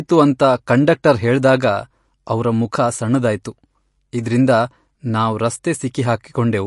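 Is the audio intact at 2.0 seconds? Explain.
No. At 2.0 seconds, as across the whole clip, the speech carries what sounds like MP3 compression, likely at a low bitrate, something like 48 kbps. With too few bits, the encoder cuts everything above about 11.2 kHz and drops weaker frequency lines that flicker from frame to frame, giving a watery, swirly quality and smeared attacks. A spectrogram shows a hard ceiling at 11.2 kHz with patchy, blocky gaps in the detail below it.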